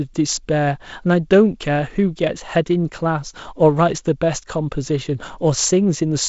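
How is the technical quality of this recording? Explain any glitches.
No glitches are audible in this speech recording; the bandwidth stops at about 7.7 kHz with light coding noise, which fits G.722 wideband telephone coding at 48 kbit/s.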